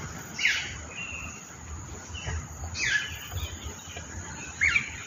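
Nothing here calls for comment, as no technical faults turn up anywhere in the recording.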